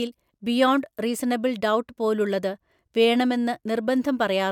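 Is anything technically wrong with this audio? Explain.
No, nothing here stands out as a technical problem; it's just a short bit of speech with nothing to flag.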